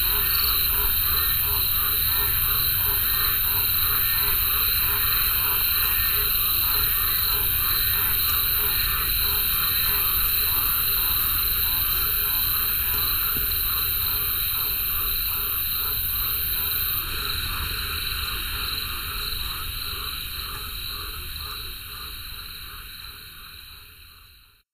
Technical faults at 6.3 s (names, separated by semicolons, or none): channel delay (comb filtering)